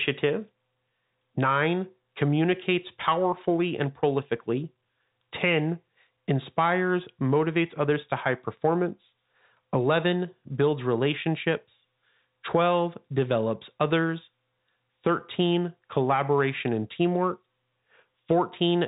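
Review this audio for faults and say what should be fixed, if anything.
Nothing to fix: the speech carries no faults, and the missing top end above about 3.8 kHz is simply the normal band limit of G.711 telephone coding.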